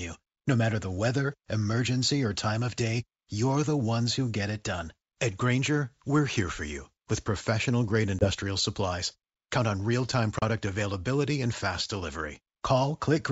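At 8.19 to 8.29 s, just after "you with professional grade", and again at 10.39 to 10.43 s, between "on real time" and "availability and fast", the wideband G.722 call suffers packet loss on an ADPCM call: about 20 ms, then 30 ms of audio (a couple, then a few packets) drop to silence. The decoder's predictor and step size lose sync with the sender's, so the sound resumes with brief, slight distortion. The waveform shows flat gaps with abrupt edges, and the spectrogram shows blank vertical slots.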